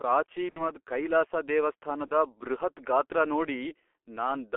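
Speech squeezed through the G.723.1 codec at about 6.3 kbit/s, so it's confined to roughly 300 Hz to 3.4 kHz and comes out heavily muffled and hoarse, consonants smeared because the codec's voice model only updates in 30 ms steps. There's also VoIP packet loss concealed by the speech codec. From 0.50 to 0.71 s, about 60 ms of audio goes missing, which fits two dropped frames. The decoder fills the gap from its last pitch and filter and fades it out as a buzzy tone or coloured noise, and the voice stays shaky a while after. At 2.06 to 2.11 s, a shorter 30 ms gap, consistent with a single frame, gets the same treatment.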